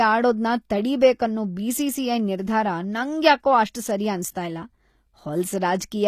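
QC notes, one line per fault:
Throughout, HE-AAC compression: the top end sounds synthetic, with s sounds gone gritty and metallic, and nothing above 14.9 kHz. That's likely band replication copying lower bands upward to fake the treble, and the plainly audible damage fits a bitrate around 24 kbps.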